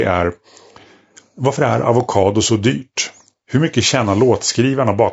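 From start to finish the speech carries plainly audible damage of the kind left by low-delay AAC compression, likely AAC-ELD at a modest rate, around 32 kbps. Its short frames blur pitch harmonics, so the voice sounds rough and grainy. A spectrogram shows smeared harmonic lines with noise filling the gaps between them.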